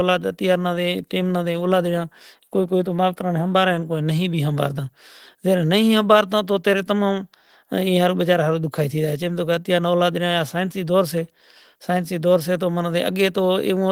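There are no technical faults to describe in this speech clip, so there is nothing to place in time order.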